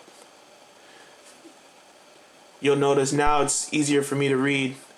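A phantom power thump lands at 3.27 s and lasts until 3.53 s. Switching the supply on a live input sends a voltage step through the coupling capacitors, producing a deep low thud that peaks near -16 dBFS and dies away within about 59 ms.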